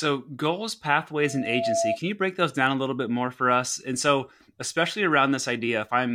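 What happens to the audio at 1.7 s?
At 1.7 s a loudspeaker feedback squeal is under way. It runs from 1.23 to 1.99 s. A single tone at 674 Hz swells over about half a second to roughly the level of the speech. The microphone is re-amplifying its own loudspeaker at that frequency.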